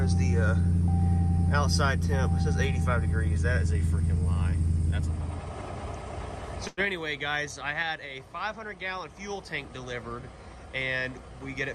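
At 6.67 s there is a short stall from a late packet, lasting until about 6.80 s. A packet arrived late and the jitter buffer ran dry. The receiver filled the gap by stretching the last sound for about 99 ms. When the packet came in, playback resumed exactly where it had stopped. Nothing is lost. The sound simply hangs for a moment, with a faint buzz or dip. Everything after it now plays 99 ms later.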